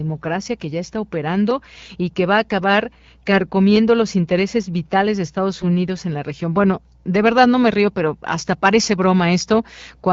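AMR bit errors hit this speech recording from 5.59 to 5.64 s, a 50 ms burst that fits two damaged frames. With roughly one bit in twenty flipped in the weakly protected bits, the excitation pulses and fine pitch, gain and spectral values decode wrongly, so the voice briefly turns scratchy and gargly.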